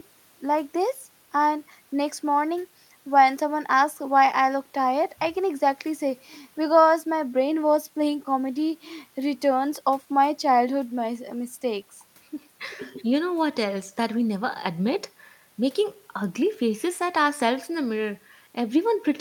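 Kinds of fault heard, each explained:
The recording carries no audible technical fault of any kind. There is nothing to list for it.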